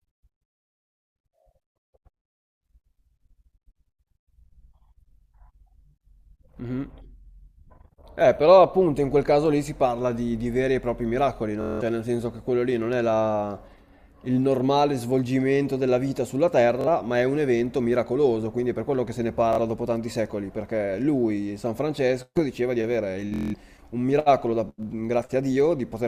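Bluetooth stutter at 11.61, 16.81, 19.53 and 23.34 s: packets arrive late, so the receiver loops its last slice into a brief buzz, skipping about 0.19, 0.05, 0.05 and 0.19 s.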